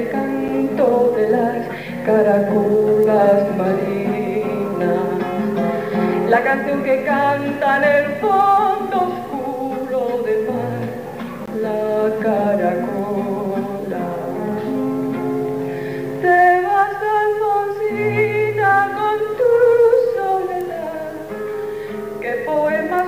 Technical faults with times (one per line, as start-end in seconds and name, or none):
0.48 block of digital silence
11.46 block of digital silence